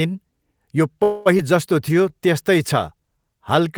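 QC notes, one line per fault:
1.03 to 1.28 s, call audio freeze: packets likely held up, jitter buffer ran dry; last sound stretched into a fading buzz for about 0.22 s, then resumes with nothing lost.
1.38 to 1.41 s, skip ahead: a stretch of delayed audio was discarded to catch up; roughly a tenth of a second goes missing, sides joined almost directly.
1.89 to 3.61 s, jitter buffer slow-down: receiver repeated pitch periods to rebuild its reserve, adding 121 ms; speech runs at 93% speed, same pitch, sounds drawn out.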